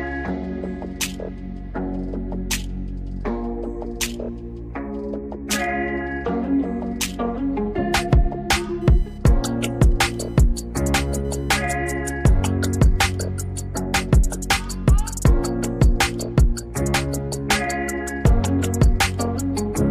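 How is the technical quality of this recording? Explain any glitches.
One glitch stands out. From 8.81 to 11.68 s there is computer activity noise. Processor, graphics or mouse load shifts the shared ground of the audio circuit. It makes a buzzing chirp pulsing around 1 kHz, roughly 35 dB below the sound, following the computer's activity rather than the audio.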